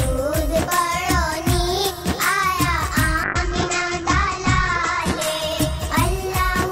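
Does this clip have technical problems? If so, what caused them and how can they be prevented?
Yes. From 3.24 s to the end at 6.72 s there is a call bitrate drop. The call's bandwidth estimate fell, and the encoder was forced from a rate that fits about 96 kbps down to one that fits about 9 kbps, holding its lowest for 1.53 s. Coarser coding makes the sound rough and watery, and the top of the band is cut from 20 kHz to 8 kHz, so it turns muffled. It can be prevented by keeping the network path stable and giving the call enough bandwidth headroom, for example with a sensible minimum bitrate.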